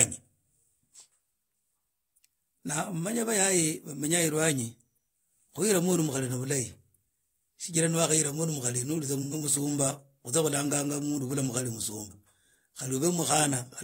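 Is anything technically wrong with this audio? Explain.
Yes. From 9.22 to 9.34 s the speech briefly turns smeared and phasey, about 85 ms long, which fits two lost frames. This is AAC frame loss with concealment: the decoder filled the gap by reusing the last good spectrum.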